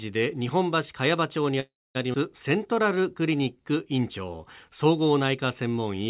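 Packet delivery on a speech call stalled, most likely leaving the jitter buffer empty, and from 1.6 to 1.97 s a call audio freeze fills about 350 ms: the last sound is stretched into a fading buzz or hiss, with roughly 240 ms of it silent, before the speech resumes where it stopped, with nothing lost. Immediately afterwards a stretch of audio was dropped, so at 2.13 to 2.16 s playback skips ahead, losing around 200 ms and joining the two sides almost directly with only a few milliseconds of fill. From 2.48 to 4.38 s the jitter buffer slow-down rebuilds its reserve by repeating single pitch periods, adding 176 ms, so the speech plays at 91% speed at unchanged pitch and sounds drawn out. Throughout, the call codec's band limit removes everything above 4 kHz, which fits a G.711 mu-law path at 64 kbps.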